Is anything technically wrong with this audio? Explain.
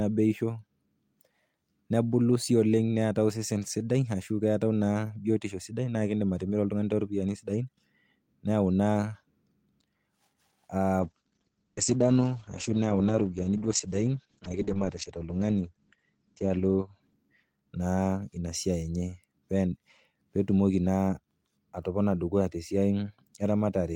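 Yes. From 11.01 s to 18.01 s there's a call bitrate drop. The encoder got starved of bits, which fits a fall from 40 kbps to about 9 kbps, so the speech turns rough and muffled as the top end shrinks from 20 kHz to 8 kHz, at its worst for about 5.4 s.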